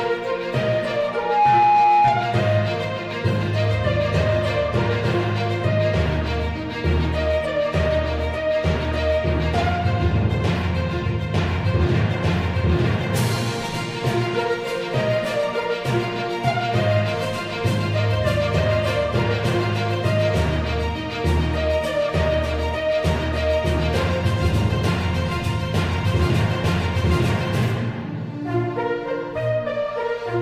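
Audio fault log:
1.11–2.47 s, loudspeaker feedback squeal: a pure whistle near 831 Hz rises out of the sound, swelling over about a third of a second until it sits a few decibels above everything else, then holds as a steady piercing tone until it cuts off. A microphone was picking up the loudspeaker it was driving, and at that one frequency the loop gain went past unity, so the tone kept feeding itself and grew.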